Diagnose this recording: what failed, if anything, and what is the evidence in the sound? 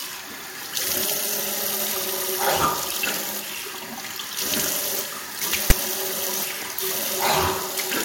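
File tags played as audio at 5.70 s: a storage-stage parsing error fed a block of text metadata to playback as samples, giving a brief, hard-edged, one-sided rasp.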